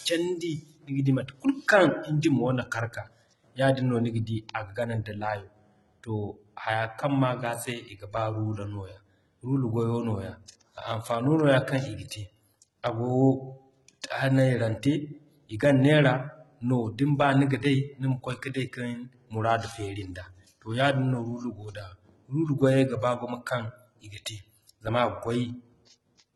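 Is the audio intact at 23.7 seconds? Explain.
No. At 23.7 seconds the speech carries the same damage as the rest of the clip: heavy HE-AAC compression, likely at a very low bitrate around 16 kbps. The codec keeps only the lower spectrum and fills the treble with copied, coarsely shaped bands, so s sounds come out gritty and lispy with a metallic edge. A spectrogram shows a hard ceiling at 11.8 kHz and blocky, repeated-looking texture in the upper bands.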